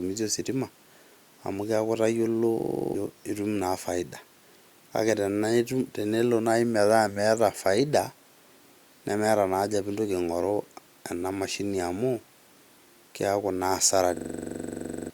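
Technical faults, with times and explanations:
2.60–2.94 s and 14.17–15.10 s: system hang loop. After "amu keaku itayiolo" and again at the end, a frozen driver left the hardware replaying one 42.67 ms buffer, which fits 2048 samples, 8 then 22 times. That produces a 23.4 Hz machine-gun stutter and drops roughly 0.3 s and 1 s of audio. The waveform shows identical repeating blocks, and the spectrogram shows evenly spaced vertical stripes.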